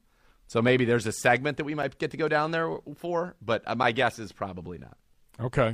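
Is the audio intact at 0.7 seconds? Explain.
Yes, at 0.7 seconds the speech plays through intact, with no dropout, click, distortion or other fault at that point.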